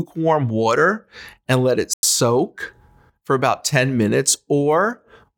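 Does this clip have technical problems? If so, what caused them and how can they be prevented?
Yes. At 1.94 s the speech cuts abruptly to silence and resumes at 2.04 s, leaving a hole of about 96 ms where the sound is simply missing rather than garbled. This is a digital broadcast dropout: the receiver stopped getting decodable frames, either through signal loss or failed checksums, and muted its output until valid frames arrived again. The gap length fits roughly three lost frames. Stronger reception and better error protection on the transmission would prevent it.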